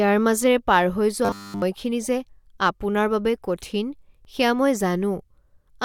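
Speech, with a stretch of robotic sound from repeated short buffers between 1.25 and 1.63 s, just after "মাজেৰে পাৰ হৈ" and before "যে আপোনাৰ বাবে কঠিন". The voice there collapses into a rigid, metallic buzz at 100 Hz. That points to a 10 ms chunk being replayed over essentially the whole stretch, likely because fresh audio arrived too slowly. Two overlaps between stream segments follow, heard as tiny skips at 2.26 s, just before "আপোনাৰ বাবে কঠিন সেয়া", and at 4.25 s, after "যে আপোনাৰ বাবে কঠিন". At each one a few milliseconds of real audio are trimmed where segment timestamps collided, so the waveform jumps. The 2 s spacing matches the segment length. That sets them apart from dropouts, which leave a silent gap rather than a skip.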